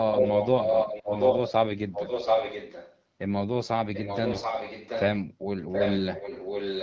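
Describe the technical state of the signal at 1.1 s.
At 1.1 s two faults overlap. An echo leak runs from 0.12 to 1.52 s: a copy of the speech about 0.73 s late and roughly 5 dB above it, likely from a loudspeaker echo canceller that let it through. Its fixed delay sets it apart from reverb. AMR bit errors from 0.96 to 1.15 s flip less-protected codec bits, turning the voice hoarse and gargly while pitch and level hold, unlike dropouts.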